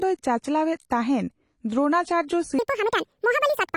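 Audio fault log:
throughout: AAC compression. The speech sounds dull and smeared, with a fizzy warble on sibilants, likely from low-bitrate AAC-LC encoding, which fits about 32 kbps. On a spectrogram the energy stops flat at a lowered cut-off, with patchy holes in the upper bands.
2.59–3.77 s: section at the wrong speed. Right after "ᱛᱟᱦᱮᱱ ᱫᱨᱳᱱᱟᱪᱟᱨᱡᱚ", the voice jumps high and hurried, 1.83 times too fast and close to ten semitones up, likely from playback against the wrong clock. The waveform compresses and the spectrogram's harmonics shift sharply upward.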